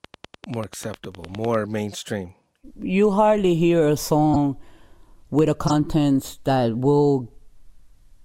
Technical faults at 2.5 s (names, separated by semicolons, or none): none